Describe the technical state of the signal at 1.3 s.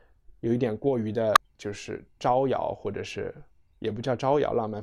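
Damaged data in a compressed stream hits at 1.33 to 1.37 s. Corrupted bytes make the decoder lose frame sync and hunt for the next header, leaving a brief glitch in the speech.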